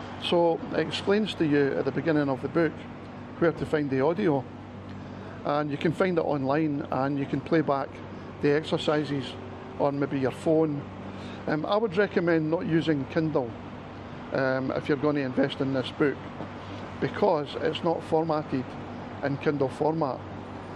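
No dropouts, clicks, distortion or other technical faults can be heard anywhere in the recording.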